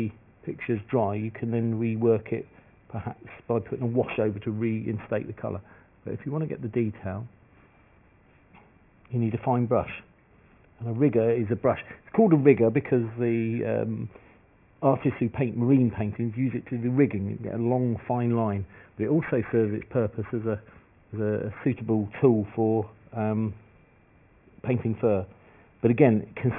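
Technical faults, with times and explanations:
Throughout, aliasing: gritty, metallic tones at wrong pitches fold down from above 3 kHz, which fits a rate cut to 6 kHz without filtering first.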